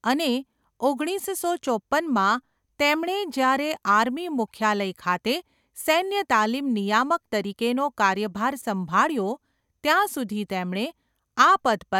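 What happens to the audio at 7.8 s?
Nothing goes wrong at 7.8 s; the speech runs on intact through that moment, with no dropout, click or other audible fault.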